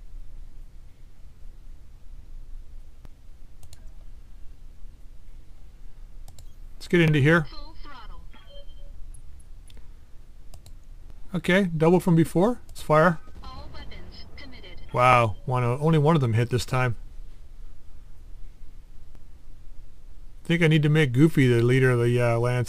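A brief click or stutter recurs at a steady pace, at 3.05–3.08, 7.08–7.10, 11.10–11.13, 15.13–15.15 and 19.15–19.18 s, each time replaying about 25 ms of sound. This is overlapping chunks. The audio was handled in 4.0 s blocks, and each new block began 25 ms before the previous one ended. That tiny stretch plays twice at every join, which explains the 4 s interval between the stutters.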